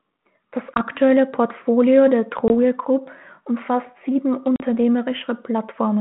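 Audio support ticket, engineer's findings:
Hard-edged dropouts at 0.74 s, 2.48 s and 4.56 s (after "umfasst sieben"), each followed by slightly distorted speech. Packet loss on an ADPCM call: 20, 20 and 40 ms gaps, about one packet, one packet and a couple of packets. The decoder's predictor and step size lose sync and need tens of ms to recover. Band-limited line audio fits a 32 kbit/s G.726 path.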